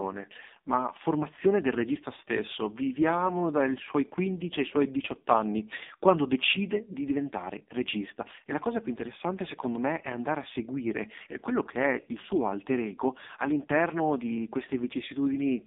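Speech that sounds buzzy and synthetic throughout, confined to a narrow band of about 200 Hz to 3.7 kHz with nothing above 3.8 kHz. This is heavy AMR narrowband mobile codec damage; the coarse vocal-tract modelling points to one of its lowest modes, around 5 kbps.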